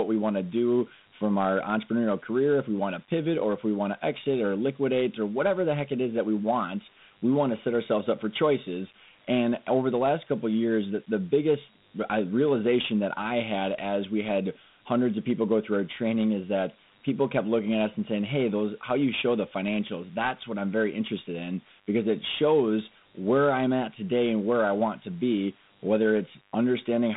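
From the first second to the end, a mains buzz sits under the speech. It holds steady at 50 Hz and stays faint, roughly 40 dB below the speech. Sharp switching spikes, twice per mains cycle, have leaked into the signal path. That is the sign of a dimmer, a rectifier or a missing shield. The spikes stack up harmonics of 50 Hz far up the spectrum. The result is a thin, raspy buzz, not a smooth hum.

The whole clip also carries Dialogic VOX ADPCM damage, the format of phone menus and voicemail. The codec stores each sample as a 4-bit step from a running prediction. The sound points to 8,000 samples a second, which fits a 32 kbps stream. The band runs from 150 Hz to 3.7 kHz, with nothing above 3.8 kHz. The speech sounds boxed in and dull. A gritty hiss rides along with it, plainly audible as the coarse steps fail to track the waveform.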